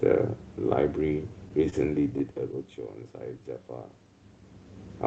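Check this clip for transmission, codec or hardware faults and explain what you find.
One transmission fault is present in the speech. From 1.70 to 1.74 s there is a short stall from a late packet. The jitter buffer ran dry, so the receiver stretched the last sound for about 22 ms, then resumed from the same place. Unlike a lost packet, nothing is skipped. The sound just lingers with a faint buzz or dip, and everything afterwards lands about 22 ms later.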